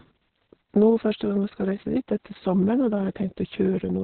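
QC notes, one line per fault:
Throughout: Opus voice compression, heavy, with nothing above 4.3 kHz; muffled, hoarse, robotic speech from coarse narrowband SILK coding, unlike a clean low-pass, fitting about 6 kbps.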